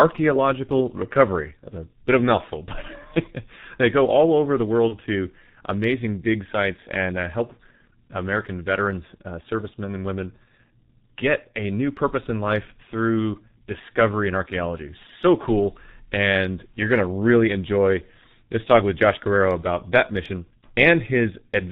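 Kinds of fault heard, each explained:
G.723.1 codec: Throughout the speech the sound is muffled and hoarse, with smeared consonants and nothing above 4 kHz. This comes from heavy coding by this early internet-telephony codec at about 6.3 kbit/s, whose coarse 30 ms frames update the voice model only slowly.
VoIP packet loss concealed by the speech codec: At about 4.88 to 4.96 s the speech is briefly stretched into a fading buzzy tone or coloured noise, then sounds weak or distorted for a moment afterwards. One lost 30 ms frame was filled by the decoder extrapolating its last pitch and filter.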